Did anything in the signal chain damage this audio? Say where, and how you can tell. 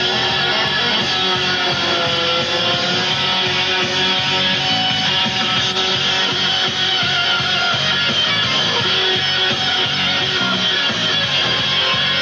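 No, nothing in the signal chain audibly damaged this audio.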